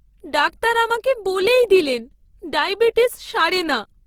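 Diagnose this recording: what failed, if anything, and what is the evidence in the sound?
Across the whole clip the speech sounds grainy and rough, with a noisy texture in place of clean tone, yet the top end still reaches about 20.4 kHz. That points to the codec stage, likely Opus compression in its CELT mode at a low rate near 16 kbps, filling starved bands with noise.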